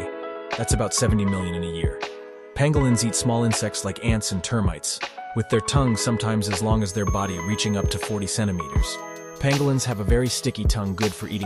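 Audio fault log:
6.73–9.60 s, feedback whistle: a thin, steady tone at 6.4 kHz sits some 25 dB below the sound, swelling and fading slowly in level, likely from a loudspeaker-to-microphone loop held right at the edge of feedback, so that one frequency rings on without building up.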